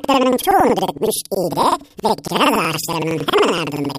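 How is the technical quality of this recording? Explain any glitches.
The recording has a continuous format fault: planar audio read as interleaved, present throughout. Blocks of about 93 ms, which fits 4096-sample planar blocks, each play twice at double speed, left then right. The speech therefore sounds an octave high, with a flutter at about 10.8 Hz.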